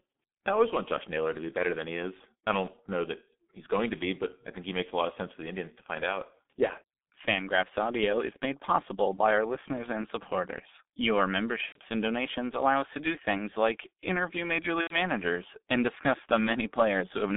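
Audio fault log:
throughout: G.723.1 codec. The speech is muffled and hoarse, with smeared consonants. The line passes roughly 200 Hz to 3.6 kHz, and the heavy coding damage points to the 6.3 kbit/s mode. The coder works in 30 ms frames and updates its model of the voice only slowly, so fast detail is averaged away. On a spectrogram, nothing appears above 3.6 kHz, harmonics look blurred into blocky bands, and fricatives show as dull patches instead of crisp high-frequency energy.
11.66–11.80 s and 14.81–14.95 s: VoIP packet loss concealed by the speech codec. In each gap, about 90 ms of audio goes missing, which fits three lost 30 ms frames. The decoder fills it by repeating its last pitch and filter at falling gain, so the sound smears into a stretched, fading fill. The first gap ends just before "and donations allow us". The waveform shows a steady, shrinking stretch. The spectrogram shows a frozen pattern that fades, then weak speech as the decoder recovers.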